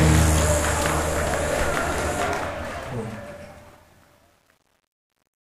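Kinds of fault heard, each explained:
Truncation distortion on a fade, from 2.23 s to the end at 5.58 s: the fade-out that begins around 2 s is computed with too few bits and no dither, so as the level drops, the waveform collapses onto a handful of coarse square steps, which fits a level stage holding only about 9 bits. The fading tail turns gritty, and from 2.98 s onward it is worst.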